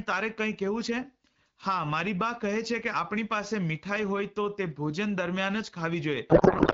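From 6.29 s to the end at 6.73 s, the speech gives way to garbled noise and warble. This is a codec payload misread. The decoder keeps accepting frames, but it reads the bit fields in the wrong places. That fits octet-aligned AMR framing being parsed as bandwidth-efficient. The result barely tracks the speech underneath. Before this, the AMR wideband (HD Voice) codec sounds clear, which fits a rate of 12.65 kbit/s.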